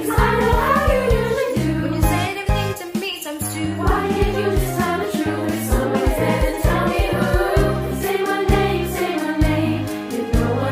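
No faults are audible anywhere in the clip.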